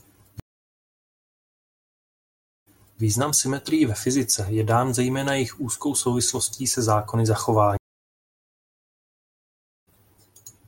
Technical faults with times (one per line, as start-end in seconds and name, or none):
0.40-3.01 stream reconnect
7.77-9.88 stream reconnect